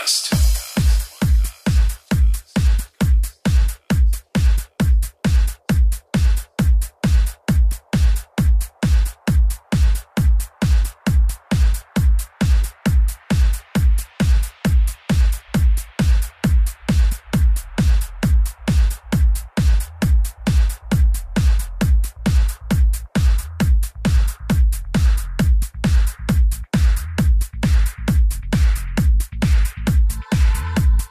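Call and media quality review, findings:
Clock slip clicks, 0.16 to 31.08 s: faint regular ticks roughly every fifth of a second, around 150 in all, loudest on sustained loud passages, gone in silence. Likely cause: two free-running device clocks about 100 ppm apart, one sample dropped or repeated per slip. Spectrogram: thin vertical broadband lines at an even spacing. Waveform: a single-sample step or kink at each line.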